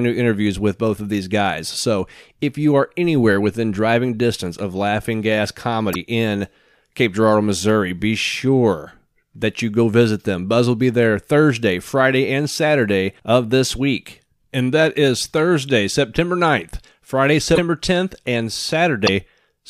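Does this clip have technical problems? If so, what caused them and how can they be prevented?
Yes. The speech breaks up three times, at 5.92–5.96 s, 17.54–17.59 s and 19.06–19.09 s. The glitches last about 40, 42 and 28 ms, roughly one to one and a half MP3 frames of 26.1 ms. The audio jumps ahead, and the first frames after each cut decode wrongly. The likely cause is a broken MP3 bit reservoir. Frames were lost from the stream. The next frame then reached back for borrowed data and decoded bytes from the wrong frame. To prevent this, cut or join MP3 streams only with frame-aware tools, or edit from an uncompressed source before encoding.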